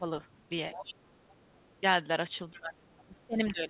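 The first 0.07 s of speech is pulled down by about 10 dB. This is speech suppressed in double talk, likely caused by the echo canceller hearing both talkers at once and ducking everything rather than separating its own talker from the loudspeaker echo.

A second voice then seeps in underneath: a barely audible trace from 0.34 to 0.39 s, about 40 dB down; a clearer stretch from 0.73 to 0.94 s, about 15 dB below the speech; faint again from 1.29 to 1.8 s, about 35 dB down; and a short scrap from 2.54 to 2.6 s, about 25 dB down. This is the other side's voice leaking through, likely because the far end, played on the talker's loudspeaker, was not fully cancelled from the microphone.

From 2.51 s to the end, speech suppressed in double talk returns more heavily. The speech sinks by up to about 20 dB for over a second as the echo canceller likely clamps down on both sides of the overlap. Throughout, nothing reaches above 4 kHz, which fits a narrowband G.711 call path.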